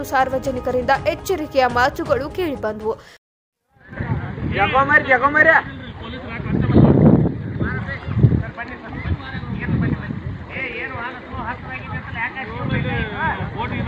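Around 8.03 s the audio turns dull and gritty, and it stays that way until about 11.79 s. That's a Bluetooth SBC bit pool drop: the link got congested and the sender cut the bit pool to keep things flowing. With fewer bits to share out, the top sub-bands get starved or dropped entirely, so the treble goes, and what's left is coarsely quantised, which gives that rough noise. The sound fits a fall from a bit pool of about 31 to 15, roughly 105 kbps, before it recovers.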